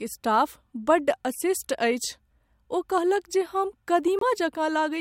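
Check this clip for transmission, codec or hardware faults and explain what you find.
One fault turns up, a corrupt frame decoded, in this speech clip from 4.19 to 4.23 s, right after "कहलक जे हम". Bits inside a few consecutive compressed frames were flipped, and the decoder played them anyway, reading wrong gains and wrong spectral codes. Energy lands at frequencies the signal never had for about 40 ms, roughly the span of those damaged frames. It comes out as a brief chirp or burst of noise peaking around -15 dBFS.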